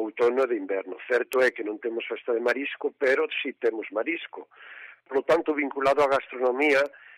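At 0.43 s there is a single sharp tick, peaking at about -25 dBFS. It is a bit error spike. One bit flipped, and the sample value jumped by a power of two before snapping back. A louder tick follows at 1.33 s, about -12 dBFS. The last comes at 6.86 s, about -18 dBFS. Each lasts only a sample or a few. Each sounds like a bright, broadband click, unrelated to the surrounding sound.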